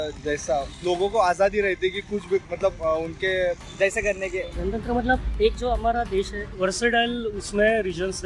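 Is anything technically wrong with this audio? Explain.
Yes. From 3.58 to 6.55 s, a wrong sample rate fault. Sound plays 1.09 times fast and 1.47 semitones higher, fitting 22 kHz audio played at 24 kHz.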